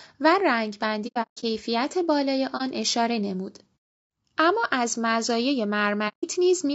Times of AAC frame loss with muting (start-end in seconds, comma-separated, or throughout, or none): 1.07-1.44, 2.57-2.62, 6.08-6.25